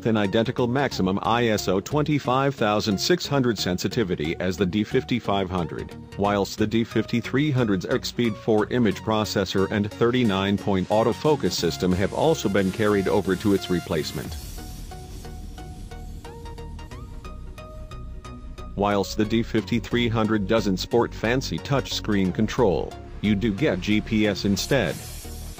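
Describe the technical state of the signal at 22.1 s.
At 22.1 s the signal is intact, with no audible fault at that moment.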